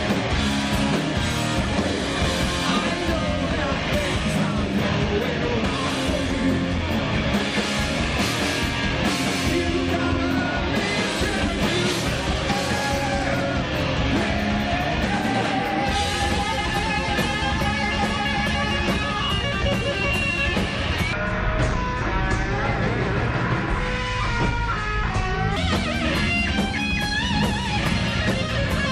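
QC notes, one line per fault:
21.13–25.56 s, section at the wrong speed: for about 4.4 s the audio runs at 0.605 times its proper rate, so everything drops close to ten semitones and drags audibly, then snaps back to normal at 25.56 s. The likely cause is this stretch being played against the wrong clock. What separates it from a pitch-shift or time-stretch fault is that pitch and tempo fall together in fixed proportion, as one would with a slowed tape.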